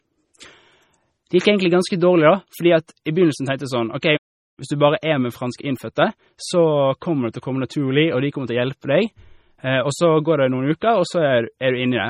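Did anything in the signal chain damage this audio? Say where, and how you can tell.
Yes, at the codec stage, and throughout the speech. The sound is watery and swirly, with chirpy sibilants and nothing above 16.1 kHz. This is likely heavy MP3 compression at a bitrate around 32 kbps. Unlike a plain low-pass filter, weak frequency lines blink on and off between frames.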